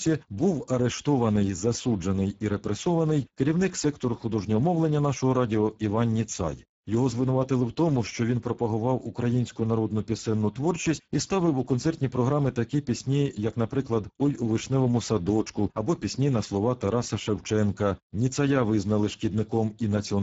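Speech, coded throughout with the Speex codec at a low setting that fits about 10 kbps, starving the excitation and leaving it plainly hoarse and noisy, with nothing above 7.7 kHz.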